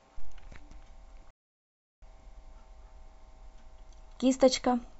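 A playback stall interrupts the speech from 1.31 to 2.02 s: the sound cuts to silence mid-flow for about 0.72 s, then resumes. The likely cause is the player running short of buffered data, or its output thread being blocked, so nothing reached the output until it recovered.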